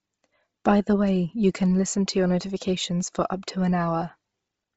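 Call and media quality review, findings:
Breathy, grainy edge on speech throughout, with heavy codec damage. Nothing above 7.7 kHz. Likely Bluetooth LC3 compression. The transform codec runs short of bits, zeroes much of the upper spectrum and fills it with noise. The codec runs 7.5 ms frames, and the degradation level fits roughly 24 kbps. Check the LE Audio link's bitrate setting.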